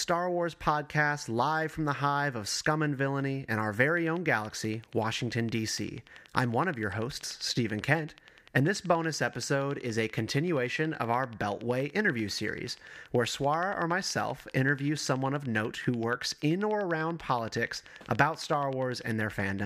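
From 3.97 s right through to 19.60 s there's a train of clicks, a steady ticking at about 10.4 per second, roughly 150 near-identical pops as loud as the speech itself, audible in the pauses too. It's likely interference from nearby gear or a faulty connection or power supply.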